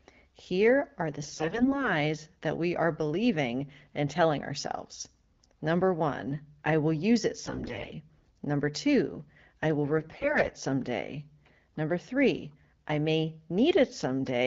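Three short stretches turn hoarse and gargly while keeping roughly the same pitch and level: from 1.22 to 1.89 s, between "are the" and "that we are believing"; from 7.41 to 7.92 s, after "I will use it"; and from 9.98 to 10.54 s, after "two I will". These are AMR bit errors. Roughly one bit in ten (about 7 in a hundred in the last stretch) arrived flipped in the less protected parts of the wideband codec's frames, which sound clear elsewhere at a rate consistent with about 12.65 kbit/s. Excitation pulses were misplaced and fine gain and spectral values were skewed, giving the scratchy texture.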